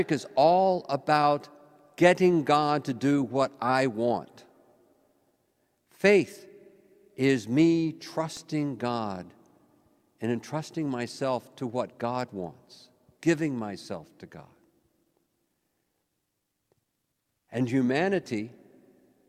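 At 8.37 s there's a single sharp snap sitting on top of the sound, fairly quiet at around -30 dBFS, likely an electrical switching spike from nearby gear.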